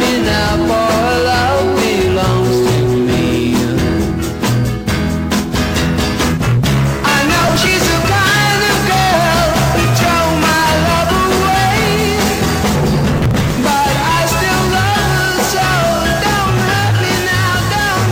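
A processor falling behind on its audio deadlines causes processor overload crackle twice, from 7.36 to 7.67 s and again from 13.18 to 13.63 s. Over each stretch it repeatedly fails to deliver buffers of around 10 ms, and the missed blocks are skipped rather than filled, so the audio jumps ahead with hard edges many times in quick succession. The result is a burst of gritty tearing over the sound that stops once the load eases, with the second burst lasting longer.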